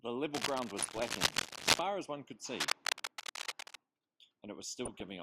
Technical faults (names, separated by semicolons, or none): cable scratch noise; DAB burbling